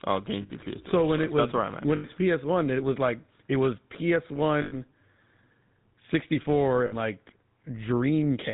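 The whole clip carries GSM full-rate codec damage: nothing above 4 kHz, and a buzzy, gravelly roughness from the pulse-driven vocal-tract model, which fits 13 kbps coding. Lost GSM frames hit at 0.42 s, at 1.96 s after "that's where I'm at", at 4.62 s, and at 6.86 s after "sixty four". Each is a 60 to 100 ms metallic ring, the last good frame repeated.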